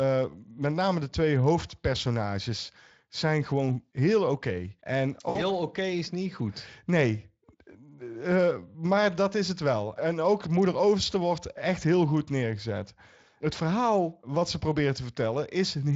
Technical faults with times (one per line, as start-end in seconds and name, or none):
5.29-5.41 VoIP packet loss concealed by the speech codec